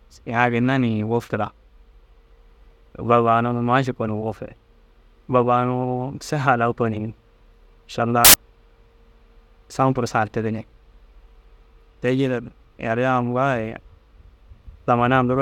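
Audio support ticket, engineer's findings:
Burst of loud broadband noise over the speech, 8.25 to 8.34 s, roughly 90 ms. Probable component: the decoder or file reader. Looks like samples built from the wrong bytes, maybe off by a byte or byte order swapped. Noisy low bits end up as the big part of each sample, so the whole burst is harsh broadband noise. Worth checking the read alignment there.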